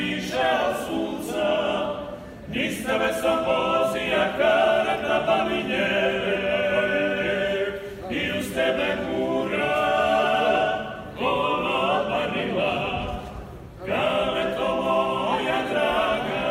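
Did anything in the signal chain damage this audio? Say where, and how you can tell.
No, nothing along the chain seems to have harmed this recording of sounds, and there's no point in it where the audio gives any sign of trouble.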